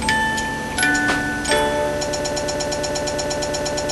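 At 2.08 s the audio locks into a broken-record loop: a fragment of about 117 ms repeats exactly, back to back, 16 times until the end of the clip, replacing whatever should have followed. This likely comes from a stalled player, encoder or stream that keeps resending its last buffered piece.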